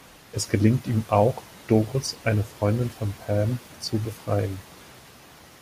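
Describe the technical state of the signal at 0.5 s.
At 0.5 s the speech signal is intact, with no audible technical fault.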